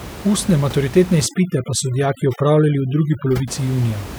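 From 1.26 s to 3.48 s, overdone noise removal takes hold of the speech. A noise reduction stage is working far too hard here. It pulls individual frequency bands down, or shuts them off, whenever they sit close to its noise estimate. Softer parts of the voice fall into that range and vanish too. The room noise, about 15 dB under the speech elsewhere, drops and breaks up into small twinkling, warbling specks.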